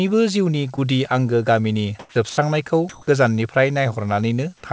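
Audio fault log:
0.76–0.79 s, short concealed packet loss: About 20 ms of audio arrived too late, so the receiver extended the preceding sound and blended back, leaving a brief smear or wobble.
1.99–2.15 s and 2.89–3.07 s, comfort noise in place of the background: The sender likely paused transmission in silence. The receiver substituted steady synthetic noise for the real background, for 160 ms just after "जीउनि गुदि आंगो गामिनि" and for 180 ms later, the second shifted by about 4 dB.
2.09–2.15 s, onset clipped by the voice detector: The voice detector was likely slow to register returning speech, so the first 60 ms went unsent and were filled with noise, making the onset abrupt.
2.29–2.37 s, sound dropped by the voice detector: Sound was likely mistaken for background and not sent. It was replaced for 80 ms by steady noise until transmission resumed.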